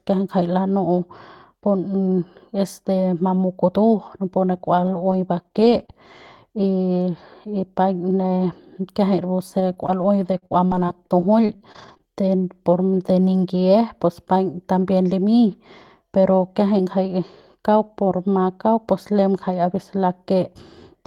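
From 4.53 to 6.0 s, right after "napu ne", brief ticks and small smears dot the speech: scattered short gaps, several lost packets each patched by stretching the preceding sound. Between 9.6 and 12.14 s, just before "de por de ningie", the speech turns choppy and robotic: repeated packet loss, with 13 gaps up to 46 ms long concealed one after another, covering 14% of that stretch.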